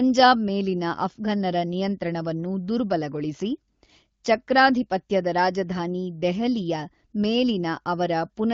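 Nothing stood out on listening to this speech, which comes through the AMR wideband (HD Voice) codec at 15.85 kbit/s with the band-limited, lightly coded quality that setting gives.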